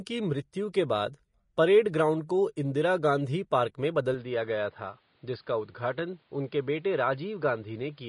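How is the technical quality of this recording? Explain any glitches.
The recording quality is compromised in two ways: a lossy codec colours the whole clip, and the sound changes character partway through.

Vorbis compression is the likely cause of the damage heard from start to finish. At a low quality setting, consistent with a bitrate near 29 kbps, the encoder cuts off everything above 10.6 kHz and quantises the remaining treble coarsely, swapping fine detail for noise of similar energy. The result is plainly audible: hissy, grainy upper frequencies, roughened tones and blurred consonant attacks across the speech.

Input switched to a poorer device is the likely explanation for the change at 4.14 s, which lasts to the end. The system moved to a different microphone or to a headset call profile. From that point nothing above 5 kHz comes through, so the speech turns duller and boxier. 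There is no gap at the switch, and the level stays about the same. The new device brings its own background noise, sitting roughly 40 dB below the speech.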